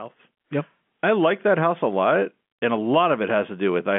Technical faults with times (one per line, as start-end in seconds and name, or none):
none